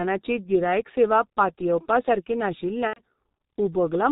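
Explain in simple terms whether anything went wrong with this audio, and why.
Yes, two things went wrong. The whole recording passed through the G.723.1 codec, an old internet-phone format that squeezes speech very hard and throws away everything above 4 kHz. The result is heavily damaged: the speech sounds muffled and hoarse throughout, with smeared consonants.

There is also VoIP packet loss concealed by the speech codec, from 2.87 to 3.02 s, right after "गिरायक सेवा पातयेवपासारकी". About 90 ms of data never arrived, so the decoder guessed by stretching the last sound it had. That produces a brief stretched sound that fades and then goes silent, and the speech stays weak for a moment after the data resumes.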